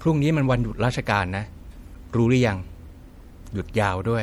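MP3 compression runs through the whole recording and is plainly audible: the speech has a dull top, a watery swirl and smeared consonants. The likely cause is an encoder short of bits, dropping treble and flickering weak frequency lines, which fits roughly 64 kbps. At 1.92 to 1.97 s, damaged data in a compressed stream briefly disrupts the audio. Corrupted bytes made the decoder misread frames, lose sync and hunt for the next header.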